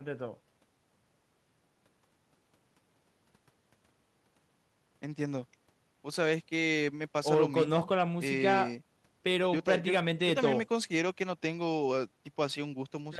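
Speech recording with no audible technical faults.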